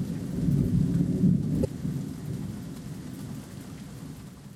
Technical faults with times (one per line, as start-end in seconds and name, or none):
1.61-1.66 damaged data in a compressed stream